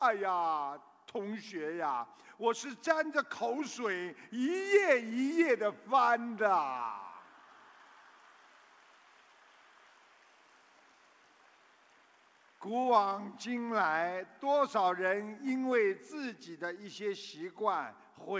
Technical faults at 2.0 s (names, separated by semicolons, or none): none